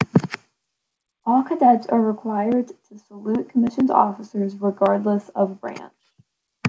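Nothing is technically wrong with this speech clip; its sound stops at 8 kHz, which fits a wideband call codec such as G.722.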